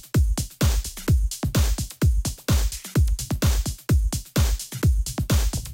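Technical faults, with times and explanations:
No technical faults can be heard in the audio; the signal stays continuous across the whole clip.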